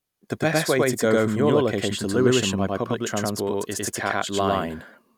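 A slower second capture path likely mixed the speech twice, giving a doubled audio track: an equally loud copy trails about 100 ms behind throughout.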